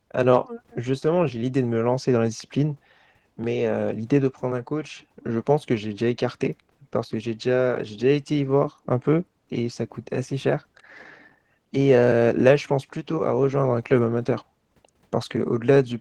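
From start to end, the speech passes through Opus voice compression at a bitrate too low for clean coding. The sound suggests roughly 16 kbps in hybrid mode, with linear-prediction coding below 8 kHz and a thin transform layer above it, keeping the full band. Because the excitation is quantised coarsely, the damage is plainly audible throughout: the voice takes on a hoarse, grainy edge and a faintly robotic, buzzy quality.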